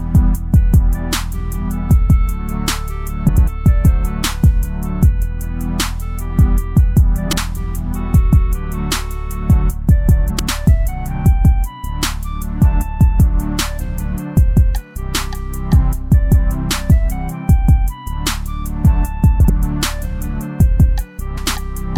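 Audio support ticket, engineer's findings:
Frames out of order: adjacent frame runs delivered swapped and decoded as received, so short stretches play halves exchanged. Garbled flutter, no time lost. 3.29 s, 10.29 s, 21.37 s (about 0.19 s, fits 93 ms halves); 7.28 s, 19.40 s (about 0.1 s, fits 46 ms halves).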